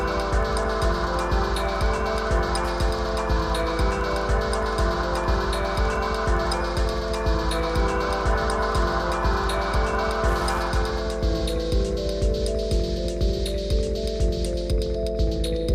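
From the start to 11.03 s there is Wi-Fi interference: a steady ticking just under ten times a second, sitting roughly 30 dB below the sound. A nearby Wi-Fi radio's beacon, repeating every 102.4 ms, is being rectified by the audio circuit, so each transmission becomes a click. Unlike mobile-phone buzz, whose bursts repeat fast enough to fuse into a tone, these ticks stay distinct and evenly spaced, then stop.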